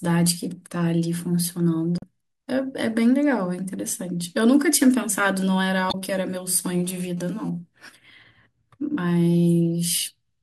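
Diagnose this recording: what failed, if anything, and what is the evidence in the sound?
Two faults are present: one at the codec stage and one in the analogue wiring.

Damaged data in the compressed stream causes two short glitches, at 1.98–2.04 s and at 5.88–5.95 s. Each lasts about 55–65 ms. At those points the decoder reads corrupted frames, produces garbage, loses frame sync and then recovers at the next valid header. On a spectrogram each appears as a narrow vertical disruption with hard edges. In the waveform the speech is broken abruptly.

A GSM phone buzz enters at the analogue stage from 6.84 to 7.49 s. It is a hard, raspy buzz at 217 Hz, about 32 dB below the speech. It pulses unevenly rather than holding steady, which fits a nearby phone sending data in bursts. Unshielded wiring or an input circuit rectifies the radio pulses into audio. A spectrogram shows a ladder of evenly spaced horizontal lines at multiples of 217 Hz, reaching well into the kHz range. 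In the waveform a regular pulse train repeats about every 4.6 ms beneath the speech.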